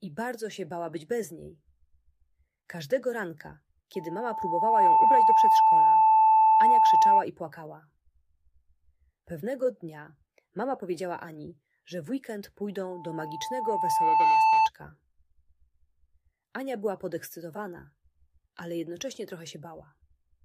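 A steady 882 Hz tone swells into a squeal well above the audio at 3.94–7.24 s and 12.91–14.70 s: loudspeaker feedback squeal, the microphone re-amplifying its own loudspeaker.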